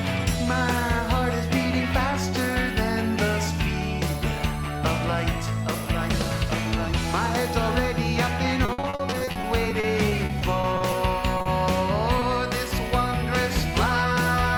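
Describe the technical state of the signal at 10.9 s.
Repeated packet loss (robotic sound) runs from 8.65 s to 10.93 s, so 10.9 s sits in its final moments. Over this stretch nearly twenty dropouts follow one another, the longest about 60 ms. Most are bridged by extending the preceding sound, about 510 ms in total, covering roughly a fifth of the span. Another 380 ms is simply missing. The result is choppy, robotic-sounding audio with pieces cut out.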